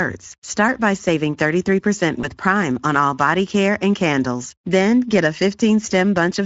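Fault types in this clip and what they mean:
Speex codec: a CELP speech codec whose damage is plainly audible here, giving a hoarse, noisy grain throughout rather than isolated glitches, at a rate that fits about 16.8 kbps.
VoIP packet loss concealed by the speech codec: one lost 20 ms frame near 2.21 s is bridged by the decoder's extrapolation, leaving a brief smear instead of a silent gap.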